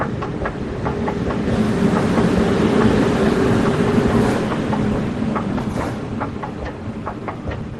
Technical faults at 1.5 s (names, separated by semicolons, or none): skip ahead